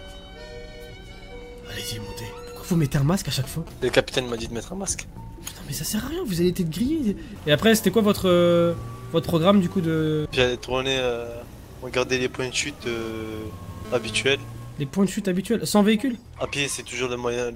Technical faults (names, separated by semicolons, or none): GSM signalling bursts; GSM phone buzz